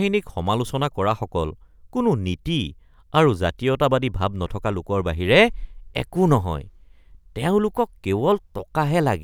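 Speech recording with no technical faults present.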